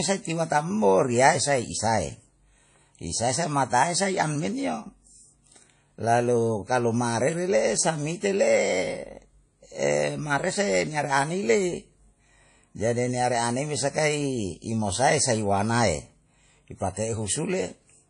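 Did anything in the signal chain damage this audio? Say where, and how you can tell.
Yes. Throughout the speech, the sound rings and washes, a hiss breathes with it, and nothing exists above 10.1 kHz. That points to the codec stage, likely WMA compression at a low bitrate: long transform blocks smear quantisation noise and zero weak components. A spectrogram shows a flat ceiling at 10.1 kHz with patchy, holed detail beneath.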